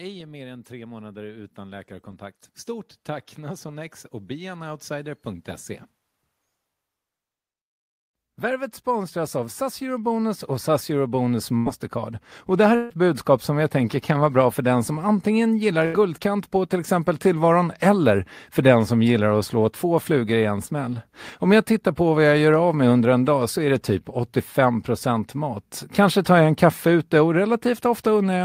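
From 8.4 to 17.0 s, automatic gain rising lifts speech and background together by about 11 dB; the waveform envelope widens steadily and the noise floor brightens on a spectrogram. Within that swell, bursts of packet loss at 11.57–11.68, 12.76–12.91 and 15.85–15.95 s drop about 80, 140 and 80 ms. The receiver stretches the last sound into a fading buzz or hiss, visible as flat smeared bands before speech jumps ahead. At 20.65–20.69 s, a short concealed packet loss fills about 12 ms with extrapolated sound, a brief smear showing as a blurred sliver in the spectrogram.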